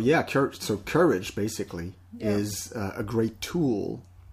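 No technical faults are audible anywhere in the recording.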